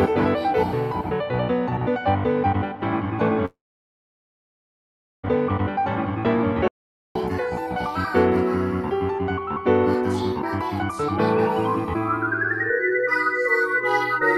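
At 3.45 s the sound breaks off and does not return until 5.25 s, a gap of about 1.78 s consistent with a long network dropout. The receiver likely stretched the last audio into a brief fading buzz or hiss, leaving roughly 1.67 s of near-silence before playback resumes further on, with that span lost.

From 6.68 s to 7.15 s the audio drops out to silence for about 0.47 s. The gap is silent with no room tone, pointing to an audio dropout to silence, likely a momentary loss of the input signal while recording continued.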